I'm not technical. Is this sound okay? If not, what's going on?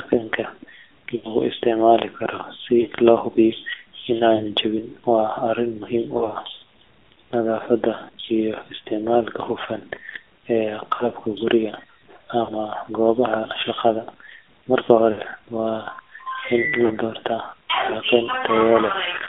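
No. The whole recording has gone through the AMR narrowband mobile codec, the older phone-network speech coder. It keeps only the middle of the voice's range, roughly 300 Hz to 3.5 kHz, so the speech sounds thin and muffled, and its heavy compression adds a noticeable buzzy, synthetic edge.

There are also lost AMR speech frames. Radio errors ruined short chunks of the signal, and the decoder filled the gaps by stretching the last good sound, which produced brief warbles or dips. These occur at 1.16 to 1.33 s (just before "isticmaali karo si loo"), 2.82 to 2.88 s, 4.36 to 4.42 s, 6.18 to 6.38 s, 10.94 to 11.08 s, 12.44 to 12.53 s, 15.12 to 15.19 s and 16.86 to 16.93 s.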